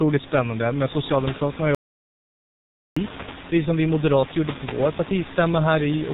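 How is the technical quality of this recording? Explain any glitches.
The recording is poor, with heavy low-bitrate codec damage throughout and one long gap.

G.723.1 codec damage runs throughout. Nothing above 3.8 kHz survives, and the coarse 30 ms frame model leaves the speech muffled, hoarse and smeared at consonants, which fits roughly 6 kbit/s. Plain band-limiting would muffle the sound without this added roughness.

An audio dropout to silence runs from 1.75 s to 2.97 s, about 1.2 s. The signal falls to silence, likely because the input was briefly lost. A natural pause would keep the room noise, which sits about 12 dB below the speech, but this gap keeps none.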